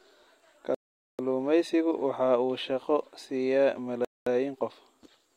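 The speech drops abruptly to silence twice: from 0.75 to 1.19 s, a gap of about 0.44 s, and again from 4.05 to 4.27 s, about 0.22 s, with the audio resuming straight after each gap. Both dropouts are likely Bluetooth stalls, where wireless interference held back packets long enough for the headphones' playback buffer to empty, so output halted until the delayed or resent data arrived.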